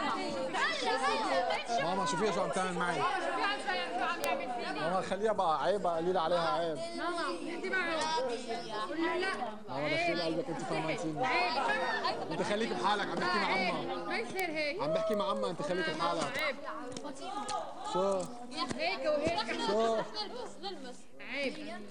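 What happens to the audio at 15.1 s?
A single flipped bit in one sample, at 15.14 s, knocks that value off by a power of two before it snaps back: a bit error spike. It reaches about -22 dBFS and is heard as one sharp, broadband tick with no relation to the surrounding sound.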